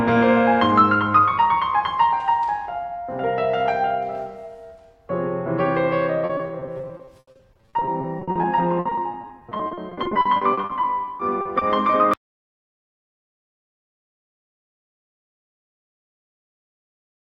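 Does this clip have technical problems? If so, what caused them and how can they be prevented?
Yes. Repeated packet loss (robotic sound) runs from 6.25 to 11.63 s: dozens of brief gaps, the longest 80 ms, are patched by stretching the preceding sound, so about a quarter of that stretch turns choppy. A larger jitter buffer and a steadier network connection would prevent it.

An audio dropout to silence begins at 12.14 s and lasts to the end. The music cuts to silence with no background noise left, likely because the input was disconnected or muted while recording continued. Secure cabling and level monitoring during capture would catch it.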